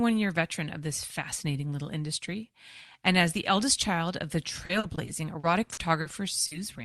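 Repeated packet loss (robotic sound) runs from 4.65 to 6.07 s in this speech recording. Seven separate holes, none longer than 40 ms, were each patched by extending the preceding sound, so about 240 ms, roughly 17 percent of that stretch, is synthetic, choppy fill. A short concealed packet loss follows at 6.47 to 6.53 s, where about 40 ms went missing and the receiver bridged it by continuing the last sound before blending back, leaving a brief smear over the call audio, whose top end stops near 12 kHz.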